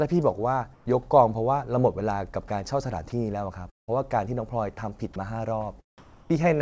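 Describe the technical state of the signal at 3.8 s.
At 3.8 s the speech is inside a gap running from 3.70 to 3.90 s. The likely cause is a long network dropout. Packets stopped arriving for about 180 ms. The receiver stretched the last sound into a brief buzz or hiss that fades out. Most of the gap, about 160 ms, is then plain silence. The speech resumes at 3.90 s with the lost stretch simply missing. The G.722 path also leaves nothing above 8 kHz.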